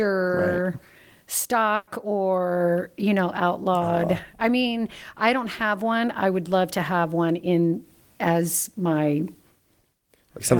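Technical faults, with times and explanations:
1.75–1.90 s, burst of packet loss: a run of consecutive packets failed to arrive in time, leaving about 120 ms of speech with nothing to play. The receiver filled that gap by extending the last received sound and attenuating it, so the speech turns into a held buzz or hiss that fades out. Playback then picks up 120 ms further along, and the speech that belonged in between is gone.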